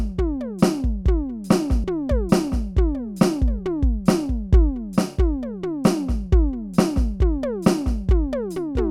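At 1.84 s the music jumps forward: compressed frames were skipped, either missing from the stream or rejected by the decoder as damaged. The jump loses around 70 ms of material, which fits two frames of about 32 ms each. The audio simply jumps ahead at the join, and there is no silent gap. That sets it apart from a dropout, where the sound stops and then resumes.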